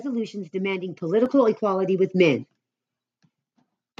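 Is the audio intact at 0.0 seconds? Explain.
Yes, the audio is intact at 0.0 seconds, with no fault present at that moment.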